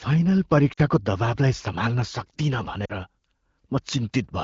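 At 0.73–0.81 s and 2.85–2.92 s, lost AMR speech frames: the decoder repeats stale parameters with falling gain over about 40 ms, causing a brief drop to near silence.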